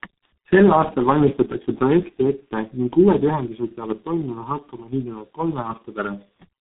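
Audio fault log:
throughout: tandem speech coding. The speech has passed through several narrowband speech coders in turn, decoded and re-encoded at each hand-off, ending in what sounds like a low-rate coder near 6.3 kbit/s. Each stage re-quantises the previous stage's errors, so roughness, muffling and warble build on each other. Nothing is heard above 3.9 kHz. Unlike a single low-bitrate codec, the degradation is layered: a gritty, smeared texture sits on top of the usual codec blur.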